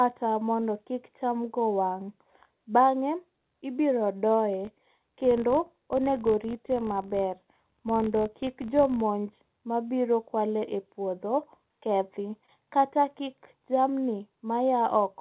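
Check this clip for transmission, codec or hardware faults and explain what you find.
Two faults are audible: short concealed packet loss at three points, and a filter restarted on every block across the middle of the clip. The speech is band-limited to nothing above 4 kHz, as expected from a G.711 A-law call path.

Short concealed packet loss occurs at 0.60 to 0.64 s (just before "kik cham go wang'"), 8.22 to 8.26 s and 12.46 to 12.50 s. Each time about 20 ms of audio arrived too late. The receiver bridged the gap by extending the preceding sound and then blended back into the real signal. Each one is a brief smear or wobble, not a hard gap. A plain dropout would leave silence, and a click would have no pitch continuity.

The filter restarted on every block from 4.65 to 9.04 s. It loses its memory at each block boundary and starts from zero, so every block opens with a small transient. 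The result is a buzz at 46.9 Hz, which fits a 1024-sample block. Mains hum would hold steady through the pauses. This buzz rises and falls with the speech level and fades in quiet moments, and it stops after 9.04 s.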